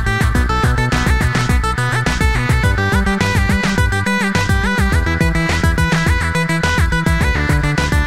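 No technical faults are audible anywhere in the recording.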